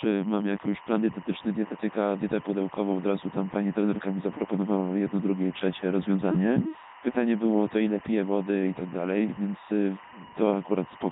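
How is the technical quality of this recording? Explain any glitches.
Technically it's in rough shape. Two problems run through the entire clip, and together they make the speech hard to enjoy.

First, there's timecode bleed from start to finish. Linear timecode from a neighbouring track or cable has leaked in, and it sits roughly 20 dB below the speech. The code is a square wave that flips between pitches around 1 and 2 kHz. Its pattern fits 24 frames per second, so you get a steady chirpy warble that never stops behind the voice.

Second, the whole thing has gone through a Codec 2 vocoder, and the damage is heavy. Instead of keeping the waveform, the vocoder sends only pitch, voicing, energy and a rough spectral shape, then rebuilds the speech from sine waves. That's why the voice comes out robotic and buzzy. The sound points to Codec 2's 3.2 kbit/s mode, and nothing survives above 3.8 kHz, so it's dull and band-limited too.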